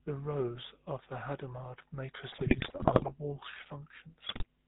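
The whole clip carries the sound of the GSM full-rate codec. Nothing above 4 kHz survives. The speech has a buzzy, gravelly roughness. That comes from a vocal-tract model driven by sparse regular pulses. The damage is plainly audible and fits the 13 kbps full-rate coder.

GSM bit errors break in from 2.32 to 3.11 s and again from 4.26 to 4.46 s. Corrupted filter, pitch and gain values reach the decoder. The speech squawks, pops and gargles. The density suggests around 5 to 6 percent of bits flipped.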